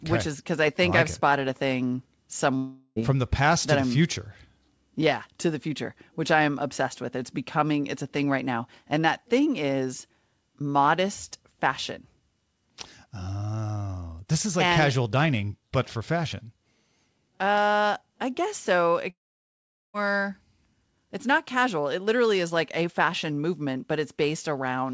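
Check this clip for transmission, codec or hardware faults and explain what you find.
Two breaks in the speech, both looking like a long network dropout; the G.722 call path itself stays clean, with its usual cutoff at 8 kHz.

At 2.57–2.99 s, between "it spotted a thing" and "from the past to", and again at 19.10–19.97 s after "I guess so", packets likely never arrived. The receiver stretches the last sound into a fading buzz, which gives way to near-silence in the second gap, and the speech resumes with roughly 0.4 s and 0.8 s missing.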